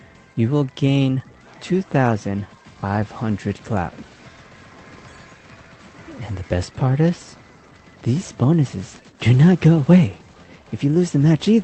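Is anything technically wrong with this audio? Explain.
No, nothing in this audio is technically wrong. It has been carried over a call path, and the signs are the codec's usual coding noise and the top end rolling off above about 8 kHz, which fits a wideband call codec such as Opus at around 20 kbps.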